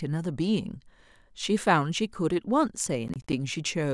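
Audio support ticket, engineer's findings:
Processor overload crackle on the speech, 3.08 to 3.33 s. Gritty tearing, a handful of short dropouts to silence with hard edges. Points to buffers of around 20 ms blowing their deadlines back to back. CPU load spike, clears once it passes.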